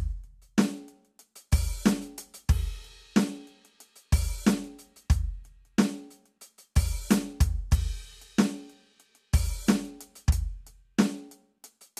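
Music, with no technical faults to be heard.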